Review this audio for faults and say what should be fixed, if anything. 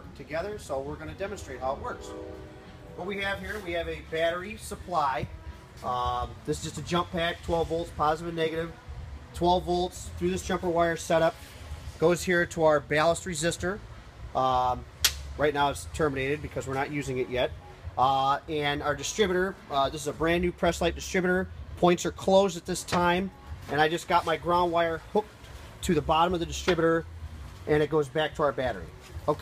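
No faults to report, and nothing needs fixing.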